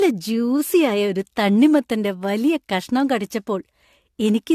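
A short speech clip that sounds swirly, smeared and hollow all the way through, with blurred consonant attacks and nothing above 14 kHz. That's generation loss, likely from about three rounds of lossy AAC encoding, each pass stacking fresh quantisation noise, consistent with 64 kbit/s AAC-LC.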